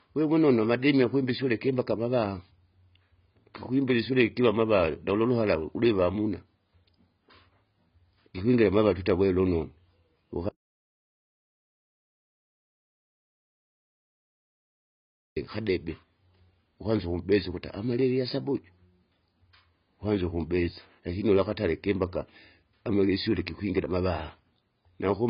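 Speech that's been through heavy AAC compression the whole way through, and it shows: there's nothing at all above about 5.4 kHz, so everything sounds dull and boxed-in, and the sibilants come out smeared and fizzy with a watery warble on sustained sounds. That hard ceiling plus the holey, swirly texture is likely the work of AAC-LC squeezed to a very low bitrate, which fits something around 16 kbps, where the encoder drops the top band and starves what's left.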